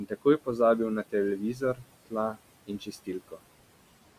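Noise suppressor artifacts run through the whole clip: the suppressor pulls the room noise down by about 18 dB between phrases, so the residue rises and falls. Speech cut by the noise suppressor occurs from 1.39 to 1.86 s and from 2.67 to 3.39 s, where quiet speech is mistaken for noise and dropped by up to about 14 and 16 dB, leaving brief stretches swallowed.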